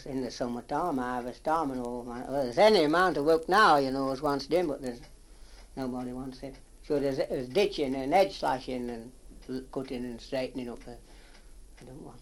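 A 50 Hz buzz runs throughout, from a resampler restarted on every block. Its 20 ms block-edge errors show as evenly spaced vertical spectrogram streaks, pointing to 24 kHz to 48 kHz conversion.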